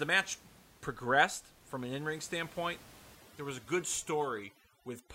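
From 3.15 s to the end, the background drops and breaks up into twinkling specks. This is overdone noise removal. The reduction was set so strong that bands near its noise estimate were cut, and quiet parts of the speech went with them, set against room noise about 24 dB below the speech.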